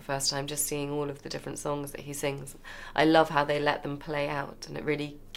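No technical faults are audible.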